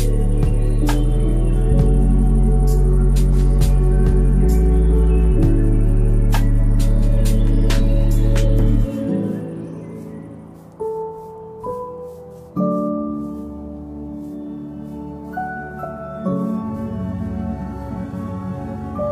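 At 7.79 s, compressed frames skipped: roughly one frame, about 20 ms, goes missing, leaving a blip or click and a visible waveform discontinuity.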